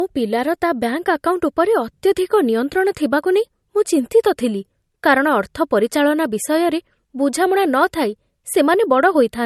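Throughout the speech, the low-bitrate audio saved at a high bitrate fault is present: it was likely squeezed through a low-bitrate MP3 first, as the sound suggests, then re-saved larger. Everything above 12.6 kHz is missing, sibilants lack air, and the first encoding's artefacts remain.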